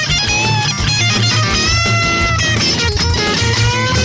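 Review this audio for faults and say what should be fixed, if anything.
There's a steady tick running through the whole clip, four per second, one every 0.25 s, and only while there's sound. That's a resampler restarted on every block: the 48 kHz to 16 kHz conversion treated each 250 ms block alone, so every block edge carries a small error. Keep one resampler instance running across blocks so its filter history carries over.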